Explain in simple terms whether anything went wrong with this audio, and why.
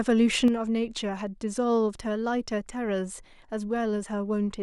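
From 0.48 s to the end, the speech suddenly gets quieter. This is likely one channel drops out, leaving only half the stereo signal.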